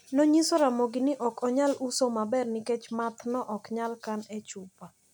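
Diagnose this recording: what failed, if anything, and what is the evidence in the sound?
Nothing in the speech recording points to a failure at any stage of the chain.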